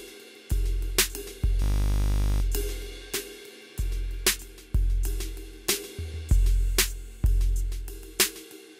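At 1.62 s the music locks into a system hang loop that lasts until 2.42 s. The playback system stalled while the sound hardware kept replaying one 20 ms stretch of its buffer, about 40 times over. The result is a steady 50 Hz buzz in place of the music, and the music picks up again with essentially nothing missing. A waveform shows one short shape repeated identically, and a spectrogram shows evenly spaced harmonic lines at multiples of 50 Hz.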